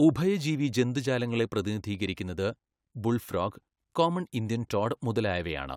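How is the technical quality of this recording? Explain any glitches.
Nothing stood out on listening to this recording, so there are no glitches to explain.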